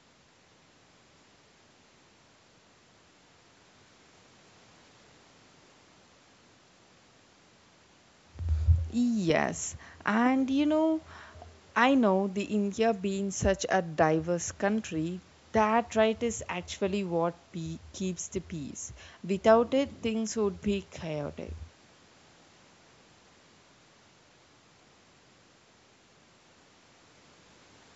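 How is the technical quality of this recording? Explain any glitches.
No glitches turn up anywhere in this speech recording; it carries the ordinary signature of a call's microphone processing, with content stopping at 8 kHz and the deepest bass trimmed away by the high-pass filter, both of which are normal for that path.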